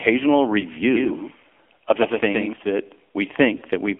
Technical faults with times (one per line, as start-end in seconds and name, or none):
0.00-4.00 AMR narrowband mobile codec
0.60-0.63 lost AMR speech frames
0.93-2.53 doubled audio track
3.58-3.62 lost AMR speech frames